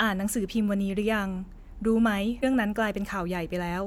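It's a speech clip with one fault: a short burst of damaged data in the compressed stream from about 2.39 to 2.44 s. Bad data there trips up the decoder, which loses sync and hunts for the next valid frame header, so you hear a brief garbled blip before the speech picks up again.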